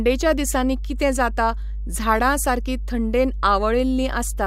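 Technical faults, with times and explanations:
Throughout, mains hum: a steady 50 Hz tone, with low harmonics, sits only about 5 dB under the speech. Power-line leakage, such as a ground loop, produces it. Its fixed pitch and unchanging level distinguish it from broadband rumble or handling noise.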